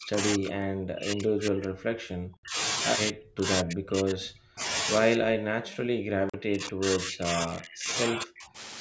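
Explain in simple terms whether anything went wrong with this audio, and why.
The speech keeps sinking to almost nothing and then recovering, from 0 to 0.18 s, 0.36 to 2.58 s, 3.11 to 3.45 s, 3.63 to 4.64 s, 5.16 to 7.9 s and 8.14 to 8.58 s. This is likely speech suppressed in double talk: with both sides talking, the echo canceller turned this talker down along with the echo.

Twice the sound stops dead: for about 64 ms at 2.37 s and about 42 ms at 6.29 s. Each is a block of digital silence, most likely where the device failed to deliver audio in time and pure silence filled the gap.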